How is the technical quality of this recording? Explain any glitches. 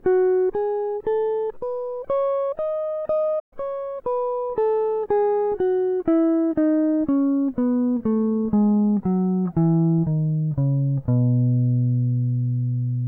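There's one clear glitch in the music, a playback stall from about 3.39 to 3.53 s. The sound cuts out mid-flow for roughly 120 ms, then picks up again. The likely cause is the player running dry of data or its thread getting blocked, so the output simply went silent until it caught up.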